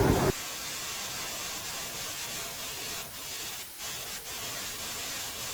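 Throughout, the speech carries a doubled audio track. A second full-band copy trails about half a second behind, at roughly the same level. It has no decay or room colour. The likely cause is a slower capture path recording the signal twice.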